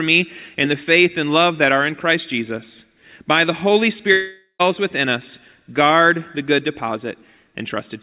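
Long network dropout, 4.12–4.61 s: speech fades into a concealment buzz, then brief silence, likely lost packets. Half a second vanishes before "within us guard the".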